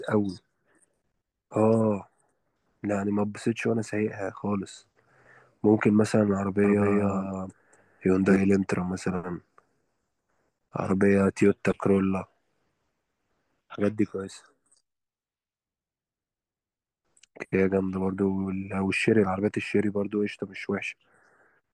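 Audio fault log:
6.64–8.36 s: doubled audio track. A dry full-band copy trails about 200 ms behind at similar level, starting and stopping abruptly, likely from a slower second capture path.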